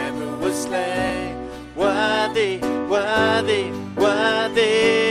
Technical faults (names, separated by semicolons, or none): Bluetooth stutter